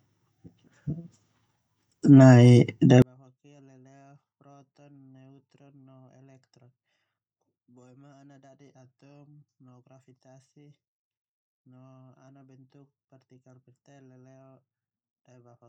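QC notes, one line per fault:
3.02–15.69 s, one channel inverted: the speech, heard summed to mono, drops by about 40 dB and nearly vanishes, likely because one stereo channel has reversed polarity and cancels the shared centre content. The waveform collapses to near-flat, and the spectrogram empties to faint residue.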